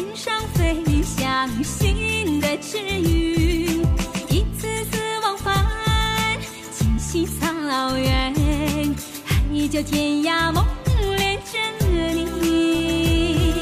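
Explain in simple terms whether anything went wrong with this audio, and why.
Nothing went wrong technically with this recording: the signal carries no faults anywhere along its length.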